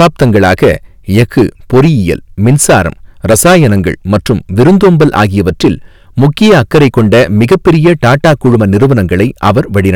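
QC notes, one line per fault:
Throughout: hard clipping. The speech is driven about 12 dB past what the signal path can carry, so every peak gets sliced flat at the ceiling, and around a tenth of the samples sit pinned there. Those squared-off tops generate a spray of high harmonics that have nothing to do with the voice, so instead of occasional crackle on the loudest syllables there is a constant harsh fuzz riding on nearly every stressed sound.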